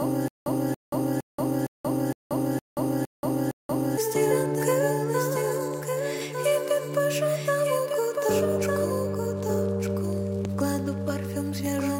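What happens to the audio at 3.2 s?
At 3.2 s the audio is inside a stutter with silent gaps. It is already under way when the clip begins and runs until 3.97 s. The same 282 ms burst repeats every 462 ms, with 180 ms of dead digital silence between repeats. The likely cause is a stalled player that replays its last fragment on each retry and then runs empty, so the material that should have played there is lost. On the waveform this looks like identical blocks separated by flat, silent stretches. A spectrogram shows matching patches broken by blank columns.

A doubled audio track is also present here and throughout the clip. A full-band copy trails by about a second at about 5 dB lower, with no decay or room colour. The likely cause is the same audio being captured a second time through a slower path. On a spectrogram every pattern reappears about one second later, fainter but otherwise unchanged.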